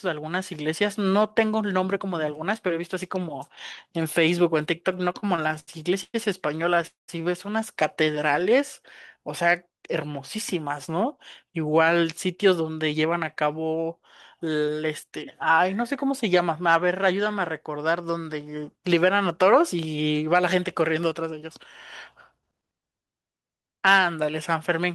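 From 4.91 to 6.85 s the speech breaks into repeated stalls (stutter): thirteen short holds, the longest 103 ms, totalling 313 ms, or 16% of that stretch. Packets arrived late, so the receiver kept extending the last sound until it could resume. Nothing is lost, but the speech drags and hiccups. On a spectrogram these appear as brief smeared, flat-topped bands repeating the preceding spectrum.

Immediately after, from 6.87 to 7.10 s, comes a call audio freeze lasting 214 ms. The sound holds as a fading buzz or hiss, then drops to about 140 ms of silence before the speech picks up where it stopped. This is likely a packet hold-up that emptied the jitter buffer. The waveform shows a decaying tail followed by a flat line.

From 8.11 to 9.19 s a jitter buffer slow-down stretches the speech to 95% speed, adding 64 ms by repeating single pitch periods. Pitch stays the same, but sounds are drawn out. 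A spectrogram shows harmonics running unusually long.

From 11.00 to 13.43 s the opposite happens: a jitter buffer speed-up runs the speech at 108% speed, trimming around a fifth of a second in total by removing tiny pitch-period slices. The pitch is unchanged, but delivery sounds hurried. Spectrogram features appear slightly compressed in time.

Throughout, the codec path shows the expected top-end limit near 12 kHz, consistent with Opus at a moderate call bitrate.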